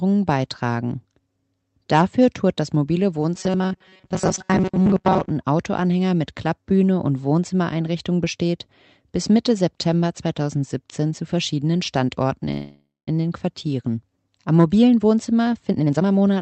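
Between 3.34 and 5.30 s the audio turns into robotic sound from repeated short buffers, a rigid metallic buzz fixed at 188 Hz. It is likely caused by the receiver replaying a roughly 5.3 ms slice over and over while fresh audio was skipped. Unlike a freeze, the sound keeps moving forward under the buzz. From 12.51 to 13.09 s there is a call audio freeze: the last sound is stretched into a fading tail that ends in about 190 ms of silence. The likely cause is delayed packets draining the jitter buffer. The 560 ms gap is inserted rather than lost, so the audio resumes exactly where it stopped, later by that amount. From 15.70 to 16.36 s a jitter buffer speed-up plays the audio at about 154% speed, cutting roughly 0.4 s. The pitch stays put, which separates it from simply playing the audio faster. Throughout, the call codec limits the top end to about 8 kHz.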